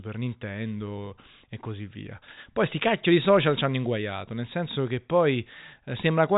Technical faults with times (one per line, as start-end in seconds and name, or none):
none